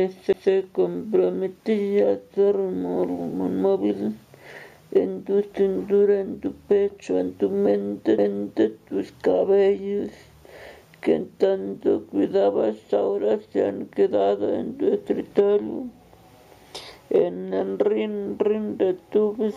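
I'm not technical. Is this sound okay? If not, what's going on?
No. There's a CD skip at 0.33 s and again at 8.18 s: the disc player's laser lost its place on the spiral track, went silent for a split second, and picked up again from a different spot, so you hear a tiny tick and a jump.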